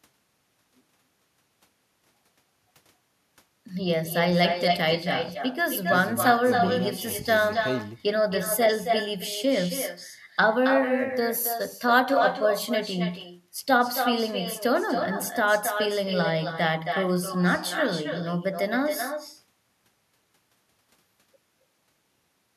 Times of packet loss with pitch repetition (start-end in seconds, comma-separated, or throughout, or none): none